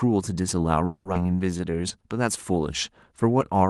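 Speech carried over a call path that sounds like Opus at a modest rate, with the top end rolled off around 12 kHz, and three timing faults in quick succession. From 0.85 to 1.07 s there is a call audio freeze: the sound stalls and the last fragment is stretched into a fading buzzy continuation for about 200 ms, most likely because packets were held up in transit and the jitter buffer ran dry. Nothing appears to be lost; the speech resumes where it stopped, so the effect is an inserted gap that pushes everything after it about 200 ms later. At 1.13 to 1.16 s the audio skips ahead: roughly 150 ms of speech is simply absent, and the two sides are butted together with only about 10 ms of fill, so a piece of a syllable or word vanishes and the flow lurches forward. This is a stretch of audio dropped in transit or by an overflowing jitter buffer while later audio was already waiting, pulling the delay back down by about 150 ms. 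From 1.19 to 1.93 s comes a jitter buffer slow-down. The speech runs at about 85 percent speed while keeping its pitch, with drawn-out vowels, because the receiver is repeating individual pitch periods and slivers of pauses to rebuild a reserve. Over that stretch about 122 ms of extra material is added.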